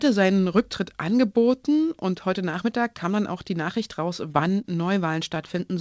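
Between 4.32 and 4.97 s the speech has scattered short gaps. About four small holes appear across this stretch, none longer than roughly 20 ms. The receiver patched each one by continuing the sound just before it. In total about 40 ms is filled this way, well under a tenth of the span. Around 30 ms of audio is missing and about 6 ms extra is inserted. You hear brief ticks and small hiccups. The speech stays clear between them.

At 5.56 s there is one more short concealed packet loss. About 10 ms of audio did not arrive in time. The receiver filled a few milliseconds by extending the preceding sound, then blended back into the real signal. It is heard as a quick smear or tick. A very short consonant could vanish here. The band stops at 8 kHz throughout, which fits a wideband call codec such as G.722.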